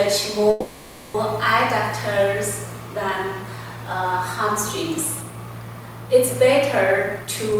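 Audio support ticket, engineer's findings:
Call audio freeze, 0.50 to 1.15 s. Last sound carried on as a fading buzz or hiss for 640 ms, then resumed. Nothing lost, delay grew 640 ms. Likely delayed packets emptying the jitter buffer.

Jitter buffer speed-up, 7.17 s to end. Audio hurried to 123% speed, same pitch. Receiver cut short pitch-period pieces, about a tenth of a second total, draining excess buffered delay.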